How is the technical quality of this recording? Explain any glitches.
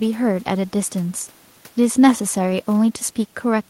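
No glitches can be heard anywhere in the recording. A faint room noise sits about 34 dB below the speech, part of the space where the microphone was rather than anything the system added.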